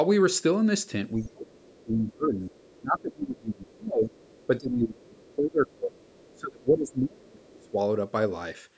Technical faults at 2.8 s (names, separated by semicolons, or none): speech suppressed in double talk; other side's voice leaking through